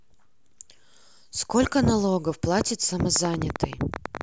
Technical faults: train of clicks

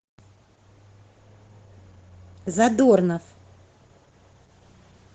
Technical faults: Opus voice compression

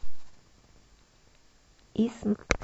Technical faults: damaged data in a compressed stream

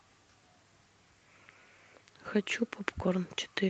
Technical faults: none

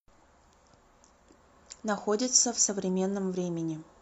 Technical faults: none

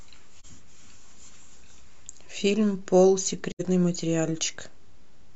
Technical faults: AAC frame loss with muting

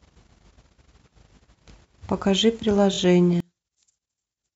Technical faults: repeated frames; one channel inverted

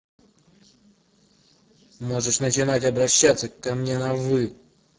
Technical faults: Speex codec

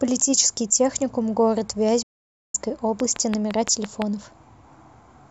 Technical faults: digital broadcast dropout; train of clicks

